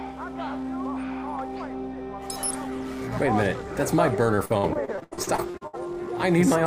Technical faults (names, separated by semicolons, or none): repeated packet loss (robotic sound)